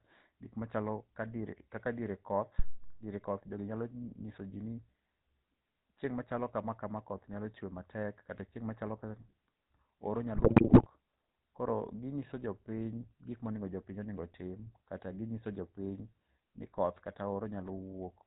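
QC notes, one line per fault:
Throughout: GSM full-rate codec. Speech is band-limited below 4 kHz and rough and buzzy from pulse-driven excitation, which fits a 13 kbps full-rate coder.
2.59–2.88 s: phantom power thump. After "dier kaka diere koth", a supply switching on a live input pushes a deep thump through the coupling capacitors, decaying over about 65 ms.
10.34–10.87 s: GSM bit errors. Corrupted filter, pitch and gain values reach the decoder across many consecutive frames, so the speech breaks into squawks, pops and gargling.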